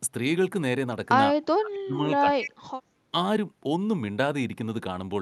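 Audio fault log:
1.56–2.00 s and 2.19–2.61 s, speech suppressed in double talk: the voice drops sharply by roughly 25 to 30 dB, likely because the echo canceller turned down both sides while both were talking. On a waveform the envelope collapses.
2.40–2.49 s, echo leak: a copy of the voice returns about 218 ms late at about 10 dB below the speech, likely residual loudspeaker echo the far-end canceller failed to remove. On a spectrogram, a weaker, time-shifted repeat of the preceding harmonic pattern appears inside the suppressed gap.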